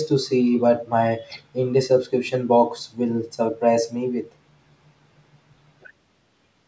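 No technical faults can be heard in this speech. It has passed through a call's microphone processing, which trims the lowest bass and leaves nothing above 8 kHz, as that path normally does.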